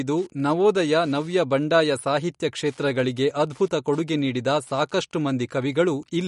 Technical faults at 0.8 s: Wi-Fi interference; MP3 compression

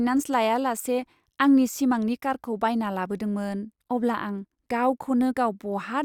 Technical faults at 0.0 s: none

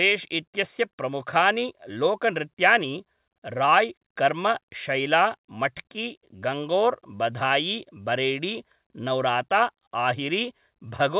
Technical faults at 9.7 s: none

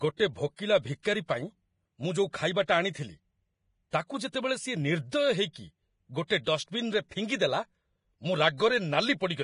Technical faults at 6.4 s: Vorbis compression; pre-echo

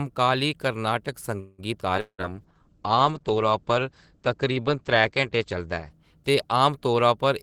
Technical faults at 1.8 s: skip ahead

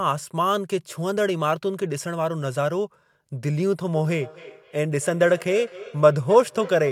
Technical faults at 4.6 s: feedback echo between two devices

